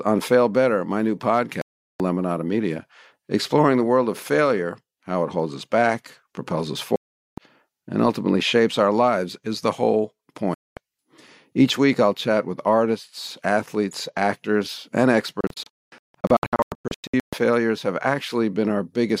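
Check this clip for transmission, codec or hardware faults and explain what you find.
The speech carries a digital broadcast dropout four times. Audio mutes at 1.62 s after "my new" for 0.39 s; at 6.96 s after "us back propels us" for 0.42 s, resuming at "and ultimately shapes our"; at 10.54 s for 0.23 s; and from 15.41 s after "artists athletes actors and", where short holes (longest 0.22 s) scatter over about 1.9 s. The receiver lost the signal or rejected corrupted frames and muted until clean ones arrived, so the programme jumps ahead.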